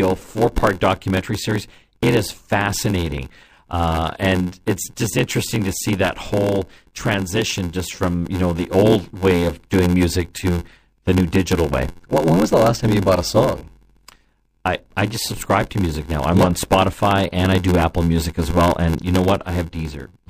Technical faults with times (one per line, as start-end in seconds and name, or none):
0.00-20.29 block size mismatch (padded)